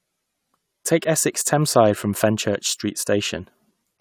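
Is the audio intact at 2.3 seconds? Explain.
Yes, the speech is intact at 2.3 s, with no dropout, click, distortion or other technical fault at that moment.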